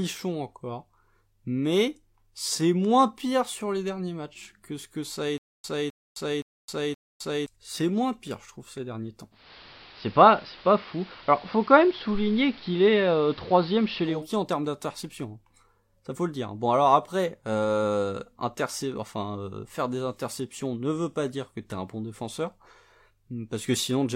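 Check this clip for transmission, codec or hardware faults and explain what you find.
Two faults stand out in this speech.

From 5.38 to 7.46 s, just after "ce que ça a", there is a stutter with silent gaps, likely a stalled stream replaying its last fragment. A 259 ms burst returns four times every 521 ms with 262 ms of dead silence between. Unlike a glitch loop, each repeat is followed by true silence.

From 9.31 to 14.27 s, between "trouve ces derniers temps" and "en termes d'interception", the audio shows digital radio blending to analogue AM. Over a 242 ms cross-fade the treble narrows, the level shifts by about 2 dB, and hiss sits roughly 25 dB below the speech. Unlike plain low-pass filtering, the hiss arrives with the band loss.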